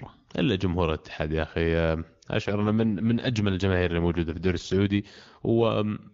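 At 2.43 s an AMR rate drop sets in: the link appears to have weakened, and the AMR wideband coder steps down from its top mode to a much leaner one, which fits a fall from 23.85 to 8.85 kbit/s, spending the freed bits on error protection. The speech keeps its full bandwidth and never drops out, but it turns rough, buzzy and synthetic until about 5.72 s, when the clearer HD Voice sound returns.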